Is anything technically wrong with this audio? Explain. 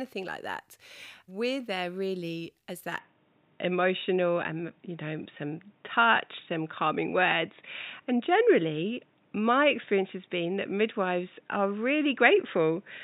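Yes. From 2.99 s, right after "there really as", the speech turns dull and boxy with no gap at the switch: nothing above 3.8 kHz, a slight level shift and a faint new noise floor. The input most likely switched to a poorer, narrower-band device.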